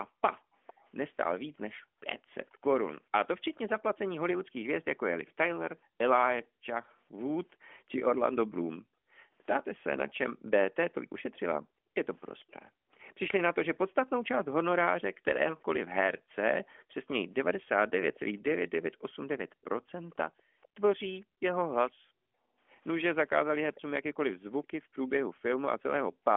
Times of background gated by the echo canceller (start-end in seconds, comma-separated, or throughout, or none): 5.85-26.24